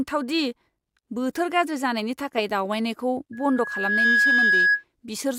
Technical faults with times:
3.33-4.84 loudspeaker feedback squeal

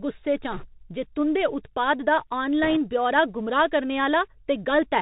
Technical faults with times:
0.00-5.02 Bluetooth CVSD headset codec
0.52-0.66 bit errors on a Bluetooth voice link
2.63-2.78 bit errors on a Bluetooth voice link

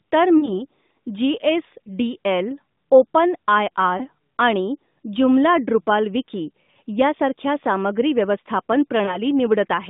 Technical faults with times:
0.38-0.52 lost AMR speech frames
3.98-4.05 lost AMR speech frames
9.06-9.18 lost AMR speech frames

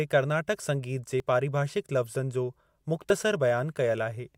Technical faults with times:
1.20 dropped buffer (overrun)
3.10 dropped buffer (overrun)

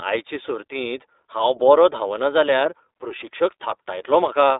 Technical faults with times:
0.00-4.59 iLBC codec

